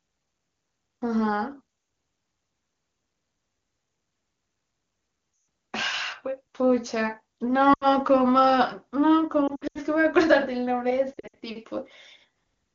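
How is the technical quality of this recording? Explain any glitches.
There are four spots of lost AMR speech frames, where radio errors corrupted frames and the wideband decoder had to fill the gaps. It does this by repeating the last good pitch and vocal-tract settings at falling gain. At 5.33–5.47 s and 7.73–7.93 s the sound drops to near silence within two frames. At 9.47–9.79 s and 11.14–11.35 s the losses are scattered in short runs, so the audio warbles and dips repeatedly, then returns briefly rough.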